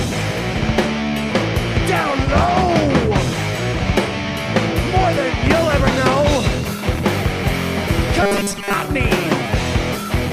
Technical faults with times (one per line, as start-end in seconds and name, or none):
8.22-8.73 robotic sound from repeated short buffers